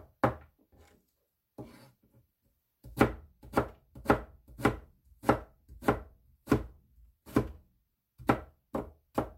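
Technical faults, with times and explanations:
No technical faults are audible.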